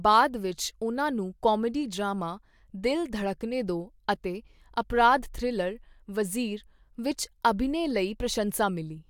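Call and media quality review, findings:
No faults found in this speech recording.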